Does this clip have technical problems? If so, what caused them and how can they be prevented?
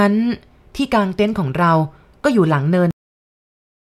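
Yes, this speech has a cut-off end at 2.91 s: the sound stops mid-utterance and drops straight to digital silence for the remaining 1.07 s. The final buffers were never written or played out, so nothing decays. A natural pause or fade-out would taper or leave room tone, but this is an abrupt drop to silence. To prevent it, flush and finalise all pending buffers before the recorder or player closes the stream.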